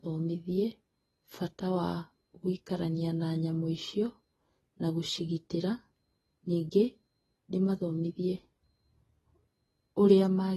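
From start to finish the speech carries plainly audible AAC compression damage, likely from AAC-LC at a low rate, around 32 kbps by the sound of it. Nothing is left above 12 kHz, so the top sounds dull, and sibilants come out smeared and fizzy.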